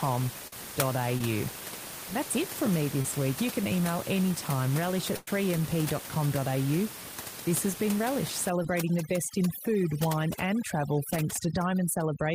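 Speech recorded over a call, with room noise sitting about 10 dB below the voice. Short concealed packet loss smears the sound briefly at 0.47, 1.18, 3.02 (after "that's it from me") and 8.63 s. The receiver covered each gap of 12 to 44 ms by extending the last sound. A burst of packet loss at 5.16 s, after "can email anytime relish", drops about 110 ms. A held, fading continuation covers it before the audio resumes further on. From 8.50 s to the end, overdone noise removal leaves twinkling specks in the background.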